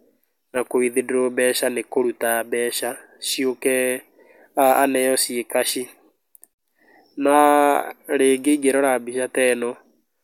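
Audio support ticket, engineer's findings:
No faults found on listening; speech path shows no dropouts, clipping, glitches or timing defects, so no component is implicated.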